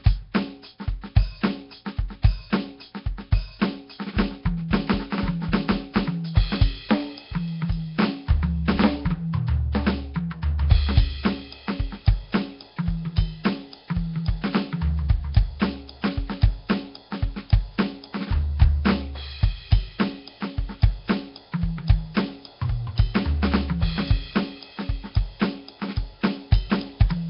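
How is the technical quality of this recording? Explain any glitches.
Quality is poor: the music is heavily degraded by coding throughout, with one brief smear before an attack.

Nellymoser compression, throughout: likely the Nellymoser Asao codec, which starves weak bands and fills them with noise. The music sounds hissy and watery, with nothing above 5.3 kHz.

Pre-echo, 9.72 to 9.75 s: the codec's noise, spread across a whole block, leaks 25 ms ahead of a sharp attack as a brief hiss, softening it.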